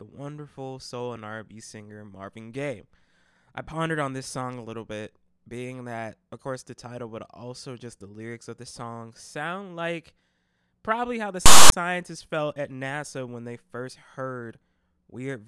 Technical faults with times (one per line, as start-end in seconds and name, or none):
11.46-11.72 file tags played as audio